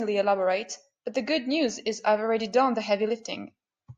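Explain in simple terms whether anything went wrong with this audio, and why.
Nothing went wrong with this recording. The speech comes through steady and intact, with no dropouts, clicks or distortion to point to.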